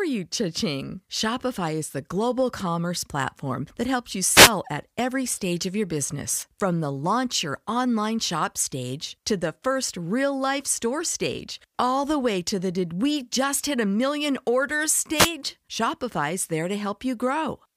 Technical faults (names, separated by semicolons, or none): wireless microphone noise hit